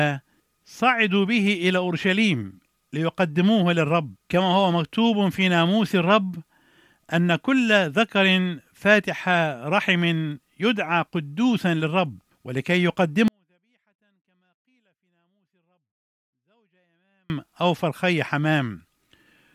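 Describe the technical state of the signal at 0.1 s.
At 0.1 s the speech signal is intact, with no technical fault present at that moment.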